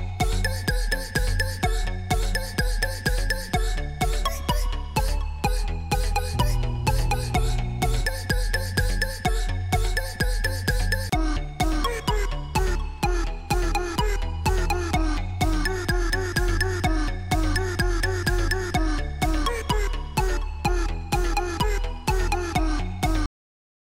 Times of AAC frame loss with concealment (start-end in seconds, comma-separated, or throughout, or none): none